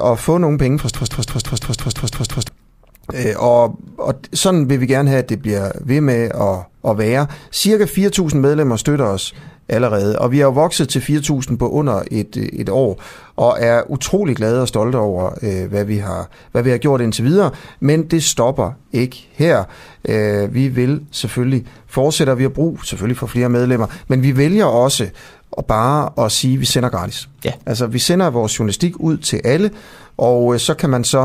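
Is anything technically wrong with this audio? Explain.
Yes. From 0.95 to 2.49 s, right after "få nogen penge fra", a broken-record loop repeats one 170 ms fragment nine times back to back. The likely cause is a stalled player or stream resending its last buffer, so the audio for that span is lost. The waveform and spectrogram show identical blocks tiled at a 170 ms period.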